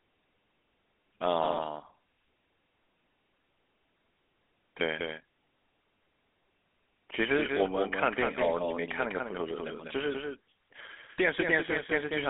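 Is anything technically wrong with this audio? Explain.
Yes. Two faults run through the whole speech clip.

A doubled audio track is present from start to finish: a second, full-band copy of the speech trails the original by about a fifth of a second, roughly 5 dB quieter, most likely because the signal is picked up again through a slower path. It has no decay or room colouring, so it sounds like a crisp, flat slapback rather than an echo. On a waveform, every syllable onset shows a smaller twin about 200 ms later. On a spectrogram, each pattern is repeated, shifted right by that same gap.

GSM full-rate codec damage is also plainly audible throughout. This codec models the vocal tract and excites it with regularly spaced pulses, keeping only a thinned-out excitation, and the result here fits a 13 kbps stream. The speech has a buzzy, gravelly roughness, and the line band runs only from about 200 Hz to 3.4 kHz. 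On a spectrogram, energy stops sharply at the top and bottom of that band, and harmonics look smeared and grainy.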